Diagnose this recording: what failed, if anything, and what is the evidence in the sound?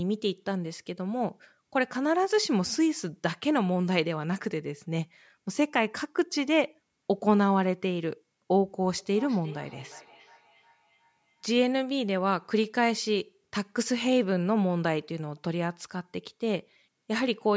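Feedback echo between two devices, in the call path, from 8.98 to 11.73 s. The speech returns at a regular interval of roughly 0.4 s, each repeat thinner and more ringing, peaking about 22 dB below the direct speech. A second device in the room replays the call audio into the first microphone, and the first device's echo canceller does not remove it.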